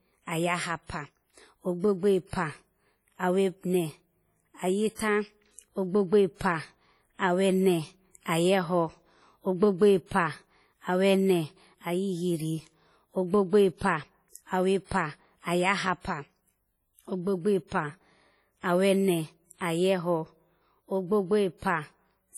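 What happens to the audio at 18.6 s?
At 18.6 s the speech is still under the WMA compression damage that runs through the whole clip, most likely from a transform codec at a low bitrate, which fits something around 32 kbps. Its long blocks smear quantisation noise over tens of milliseconds and drop weak spectral lines. The damage here is heavy: the speech rings and sounds washy, with a hiss that rises and falls along with the sound.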